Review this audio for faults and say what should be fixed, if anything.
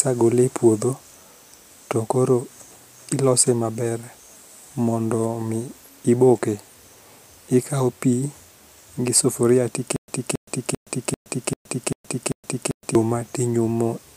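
Right after "gi sufuria", from 9.96 s to 12.95 s, there is a stutter with silent gaps. A 273 ms burst of speech repeats seven times, each followed by 120 ms of digital silence, giving an even 393 ms cycle. The likely cause is a stalled stream replaying its last fragment at each retry before running empty, and the speech that should have filled that stretch is lost. Buffering further ahead of playback and recovering from underruns without replaying the last fragment would prevent it.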